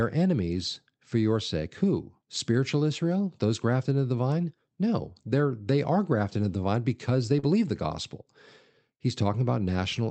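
Around 40 ms of this speech recording failed to reach the decoder in time between 7.39 and 7.45 s, a short concealed packet loss. The receiver stretched the preceding sound across the gap, leaving a brief smear after "the vine because they" and before "the gospel".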